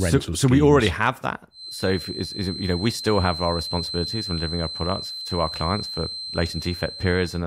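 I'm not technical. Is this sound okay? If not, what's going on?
No. Right after "we already have that", at about 1.49 s, a thin, steady high whistle starts behind the speech and keeps going until the end at about 7.47 s. It sits at roughly 4.1 kHz, clearly quieter than the talking, and slowly swells and fades in loudness. This is a feedback whistle, most likely from a loudspeaker's sound getting back into the microphone just enough to ring at one pitch without building into a loud howl.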